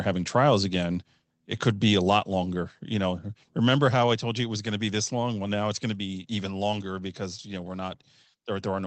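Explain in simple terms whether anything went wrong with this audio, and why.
Microphone volume stepped down, at about 2.19 s, right after "could be a". At that instant the speech and the background both drop to a slightly quieter level in a single step and stay there. The likely cause is the call software deciding the microphone was too loud and turning its input volume down. That change happens before the sound is sent, so everything after that moment arrives a little softer.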